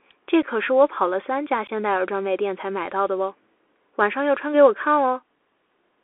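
From the start, the speech runs through a Bluetooth CVSD headset codec, consistent with a 64 kbps one-bit delta stream. Content is confined to roughly 300 Hz to 3.4 kHz. The adaptive step lags fast transients, so sibilants turn scratchy and a granular hiss sits underneath throughout.

At 0.42 s and again at 1.67 s there is unconcealed Bluetooth headset packet loss. The gaps last about 7.5 ms and 15 ms, which fits a couple and then a few dropped voice packets. Each leaves an abrupt hole, and the speech returns briefly quieter.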